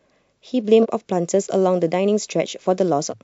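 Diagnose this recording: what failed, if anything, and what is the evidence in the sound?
Speech lurches forward at 0.82–0.86 s and again at 3.09–3.13 s. These are compressed frames skipped at the codec decoder: whole 46.4 ms frames went missing or were rejected as damaged, losing roughly a third of a second, then about 0.7 s.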